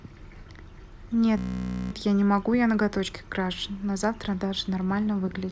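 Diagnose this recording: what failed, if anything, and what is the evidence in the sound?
A system hang loop failed at the driver or buffer stage: the host or driver stalled while the audio hardware kept replaying the same ring buffer. From 1.38 to 1.92 s, one 16 ms slice of the speech repeats exactly, about 34 times, which fits a 256-sample buffer. Because the slice is so short, it merges into a steady 62.5 Hz buzz rather than a stutter. Little or no speech appears to be missing once playback resumes.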